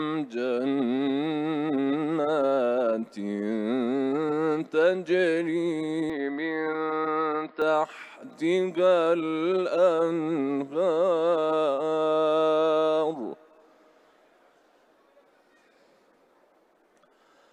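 From 6.10 to 7.62 s the sound turns dull and narrow, with nothing above 5.2 kHz, no gap at the change and little shift in level. A faint new background noise, roughly 45 dB down, comes with it. The likely cause is an input switched to a poorer device.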